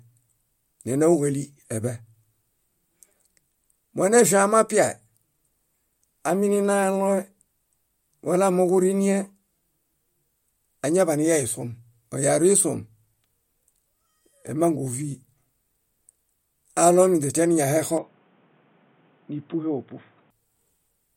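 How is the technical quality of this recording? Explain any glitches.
One fault affects the speech. From 17.98 s to 20.30 s the input was likely switched to a poorer device. The band stops at 3.8 kHz, so the voice turns dull and boxy and drops around 5 dB. It picks up a new noise floor roughly 35 dB down, with no gap at the switch.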